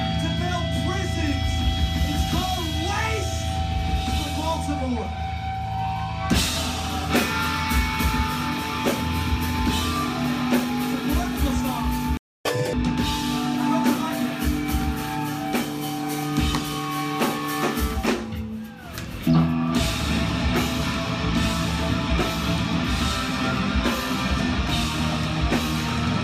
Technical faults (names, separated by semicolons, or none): playback stall; catch-up at higher speed